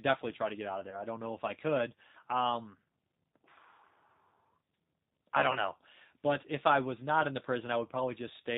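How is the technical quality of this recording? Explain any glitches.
The recording is clear enough to follow, but it has two kinds of fault. A low-bitrate codec colours the whole clip, and two short dropouts were patched over by that codec.

The G.729 codec is audible from start to finish. The speech sounds slightly rough and synthetic. Nothing above 4 kHz comes through, so it is dull and band-limited. This fits an 8 kbit/s G.729 stream. That codec does not send the waveform. It rebuilds speech from a vocal-tract filter, a pitch predictor and a few pulses per 10 ms frame.

VoIP packet loss concealed by the speech codec occurs twice. The first is at 0.90 to 1.01 s, between "to get out of" and "don't know if I". The second is at 5.53 to 5.58 s. Each gap fits one lost 20 ms packet. The decoder guessed the missing audio from its last pitch and filter, at falling gain. You hear a brief stretched sound that fades. 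The speech stays weak for a moment as the decoder recovers.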